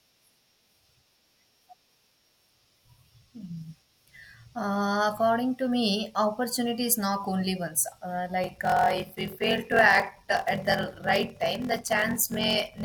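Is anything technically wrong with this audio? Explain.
Yes. From 8.42 s to the end, the speech takes on a 43.1 Hz buzz and slows to 0.861 times normal speed at about its usual pitch. This is a block size mismatch (padded): shorter written blocks are zero-filled to fit a read of what sounds like 1024 samples, inserting a gap every block.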